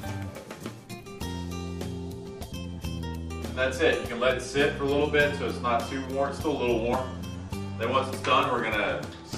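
At 0.35 to 0.37 s, then at 2.51, 4.30 and 6.92 s, brief glitches mark damaged data in a compressed stream: corrupted bytes make the decoder misread frames and lose sync until the next header. Each shows as a waveform glitch.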